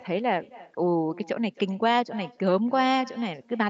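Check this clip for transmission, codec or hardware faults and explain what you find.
One transmission fault runs through the whole clip: an echo with no canceller. Throughout the speech, each phrase is followed by a faint repeat roughly a third of a second later, about 22 dB below the direct signal. The far end is playing the call through a loudspeaker, its microphone captures that playback, and no echo canceller subtracts it before sending it back. The returning copy has crossed the network twice, so it arrives late, and it sounds thinner than the original. The audio is band-limited to 8 kHz, which fits a wideband Opus call path.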